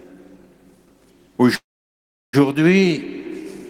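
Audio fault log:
1.55–2.35 s, call audio freeze: the sound stops moving forward for about 0.78 s. A brief continuation of the last sound carries on and fades, leaving roughly 0.71 s of silence, then playback resumes exactly where it halted with nothing skipped. This is likely packets held up in transit draining the jitter buffer. The receiver filled the wait rather than dropping audio, so everything after this point now plays about 0.78 s later.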